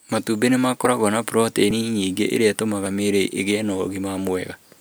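Four skips break up the speech at 0.85, 1.71, 2.86 and 4.29 s. At each one the sound jumps straight ahead, with no gap of silence, as if around 20 ms had been snipped out and the edges butted together. These are likely dropped buffers (overrun): the recording software fell behind and the hardware overwrote a block of samples before it was read, so that slice never reached the file.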